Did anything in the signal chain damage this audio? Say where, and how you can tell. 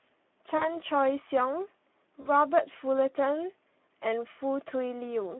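Yes. The speech sounds hoarse and grainy throughout, confined to roughly 200 Hz to 3.5 kHz. That is Speex codec damage at the codec stage: too few bits for the excitation leave a noisy, rough texture, which fits a low bitrate around 11 kbps.

Twice the speech smears into a fading tone or noise and stays weak or distorted afterward, from 0.57 to 0.76 s and from 2.21 to 2.29 s. This is VoIP packet loss concealed by the speech codec at the network stage. Each gap fits about 40 ms lost, roughly two frames, which the decoder filled from its last pitch and filter.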